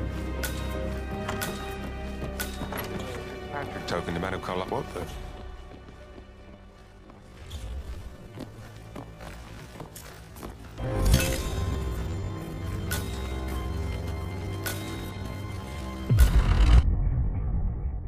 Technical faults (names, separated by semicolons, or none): time-stretched section